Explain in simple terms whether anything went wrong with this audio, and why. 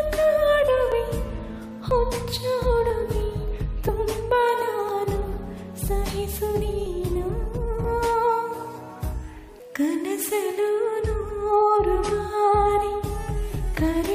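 Something did go wrong: there is a short click or tiny skip roughly once per second, at 0.92, 1.91, 2.90, 3.89, 4.89, 5.88, 6.86 and 7.84 seconds. This is an overlap between stream segments. The audio arrives in one-second pieces whose timing labels overlap slightly, so the player discards between about 6 and 19 milliseconds it wrongly treats as repeated. That sound was never actually doubled, so it is simply lost and the waveform jumps abruptly.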